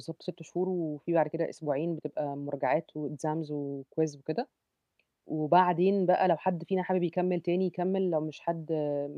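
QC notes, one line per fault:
No faults heard in this speech recording.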